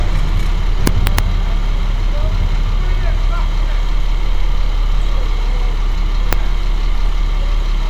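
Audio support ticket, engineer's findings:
Integer overflow, 0.87–1.19 s and 6.33 s. Sharp cracks on loud peaks. Sum or gain stage wraps past the integer maximum to the opposite sign instead of saturating. Peaks are overdriven about 1 dB in the first span and barely reach the limit at 6.33 s. Each overshoot snaps across the full range. Clipping flattens peaks into a dull buzz; here the waveform inverts, so the cracks are violent even at tiny overdrive. Fix: saturating arithmetic or a limiter before the wrap.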